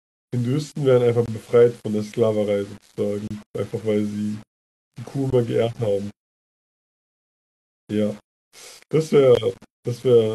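From start to end, the speech sounds grainy, with distortion that follows the signal. This is likely low bit depth without dither, with rounding error roughly 30 dB down, fitting about 7 bits.

Gaps between stream segments cut in at 1.26 s, 3.28 s, 5.30 s and 9.35 s. Each is hard-edged silence of 17 to 30 ms, spaced in 2-second steps.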